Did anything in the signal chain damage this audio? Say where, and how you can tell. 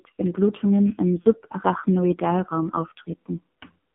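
Yes. At the codec stage, the speech passed through the AMR narrowband mobile codec throughout. The band is confined to about 150 Hz to 3.5 kHz, and the heavily buzzy, synthetic tone points to a very low AMR-NB rate, around 5.9 kbps, where few pulses model each excitation.

Over the network, lost AMR speech frames cause a brief dip or warble from 1.22 to 1.25 s, which fits a single 20 ms frame failing its checksum. The decoder filled the gap by repeating its last pitch and vocal-tract settings at reduced gain.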